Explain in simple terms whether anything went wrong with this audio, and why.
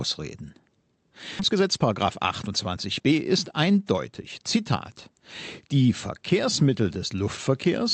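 Two things went wrong, both in how the audio travelled over a call connection.

At about 1.39 s there is a skip ahead. Roughly a second of speech was thrown away, and playback jumps straight to later speech. There is no gap or filler. The two sides are simply joined, so something is missing.

From 1.49 s to 4.73 s there is a jitter buffer speed-up. Too much audio had piled up waiting to play. To catch up, the receiver cut out many tiny slices, roughly 0.7 s in all. The speech runs about 19% fast at its normal pitch and sounds hurried.

The audio passed through the Opus call codec, which keeps sound only up to about 8 kHz.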